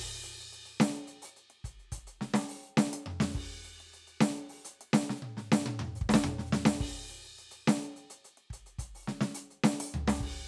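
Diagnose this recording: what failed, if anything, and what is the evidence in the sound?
Nothing in this music recording points to a failure at any stage of the chain. There is no audible event that would need a diagnosis.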